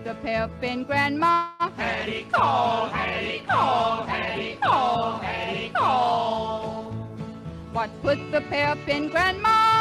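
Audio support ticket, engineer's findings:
Call audio freeze, 1.31–1.63 s. Likely packet delay in transit; jitter buffer ran dry. Receiver extended last sound as fading fill for about 280 ms. Nothing lost; stream resumes where it stopped, leaving everything after about 280 ms late.

Jitter buffer speed-up, 8.09 s to end. Buffer over target; receiver trims short pitch-period slices repeatedly. Sound plays at 104% speed, pitch unchanged. Around 70 ms removed across the stretch.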